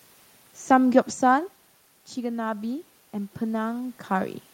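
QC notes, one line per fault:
2.14–4.44 s, automatic gain rising: input dropped about 11 dB, so the gain control gradually added about 5 dB, swelling voice and room noise together.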